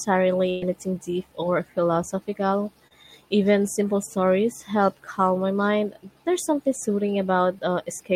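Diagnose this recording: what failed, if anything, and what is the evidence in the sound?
The network stage failed twice. The first fault is a burst of packet loss from 0.49 to 0.63 s. About 120 ms of the call never arrived in time to play. The receiver bridged the hole by extending the last sound for roughly 121 ms, fading it as it went, so the speech turns into a held, dimming buzz or hiss. The talker then resumes further along. The section in between is simply gone.

The second fault is a short concealed packet loss between 2.87 and 3.05 s. This time only about 20 ms of audio went missing on the network. The decoder covered it with about 29 ms of synthesized continuation built from the preceding sound, then cross-faded back into the real signal. The result is a brief smear or wobble rather than a gap. A short consonant at that point can drop out entirely.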